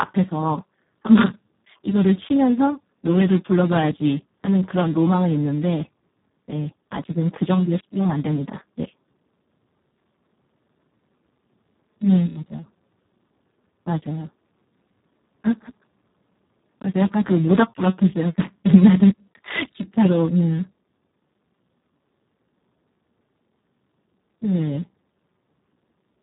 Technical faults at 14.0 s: Speex codec

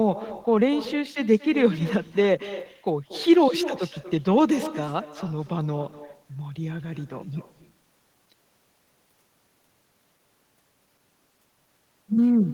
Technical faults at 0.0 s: echo with no canceller

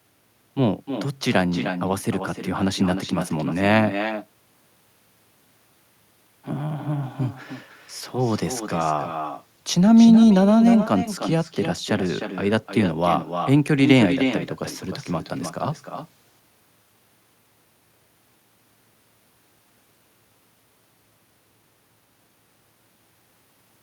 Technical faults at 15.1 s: echo with no canceller

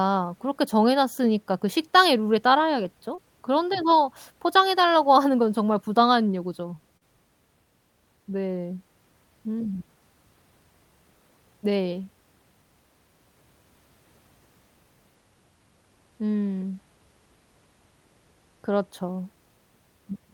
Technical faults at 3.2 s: short concealed packet loss

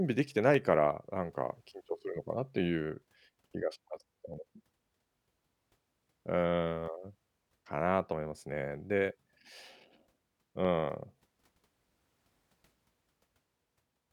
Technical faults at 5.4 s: clock drift buffer slips

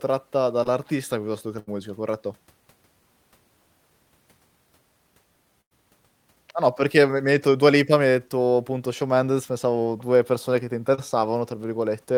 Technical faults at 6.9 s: none

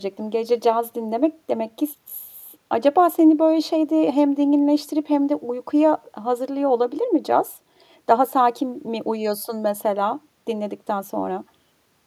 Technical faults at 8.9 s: none

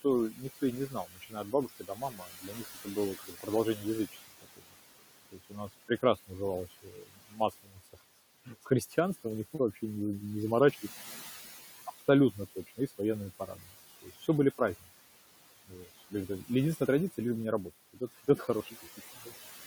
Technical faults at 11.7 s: noise suppressor artifacts

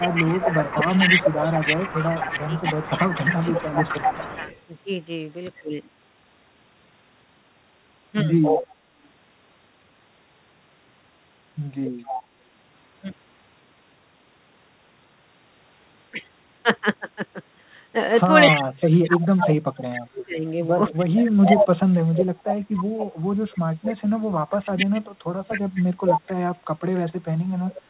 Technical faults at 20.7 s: speech suppressed in double talk

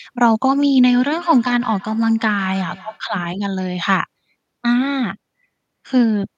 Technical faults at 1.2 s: feedback echo between two devices

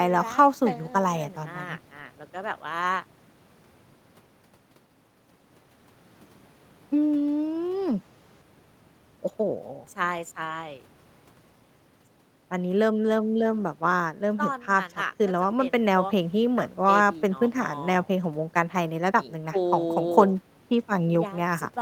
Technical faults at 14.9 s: none

